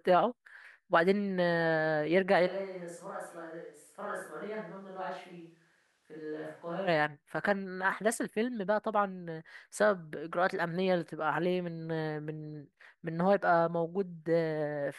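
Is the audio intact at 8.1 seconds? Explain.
Yes, the speech at 8.1 seconds is intact, with no audible fault at that moment.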